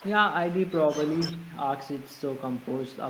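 No technical faults can be heard in this speech recording. Nothing in it calls for a time mark or a closer description.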